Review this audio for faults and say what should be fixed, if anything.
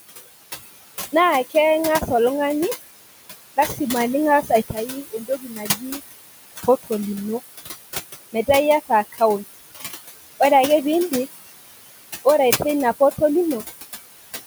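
Noise suppressor artifacts run through the whole clip. The suppressor pulls the room noise, which sits about 11 dB below the speech, down by about 17 dB between phrases and lets it back up under speech. A spectrogram shows blotchy, flickering noise patches pumping with the speech. Lowering the suppression depth and smoothing its gain over time would prevent this.

Speech cut by the noise suppressor occurs at 3.57–3.8 s, with a drop of about 10 dB over roughly 150 ms, and at 4.69–6.0 s, with a drop of about 18 dB over about half a second in total. In both places the suppressor treated quiet speech as noise, so the sound goes faint and swallowed. The waveform shows abrupt envelope dips. A less aggressive speech-presence threshold would prevent it.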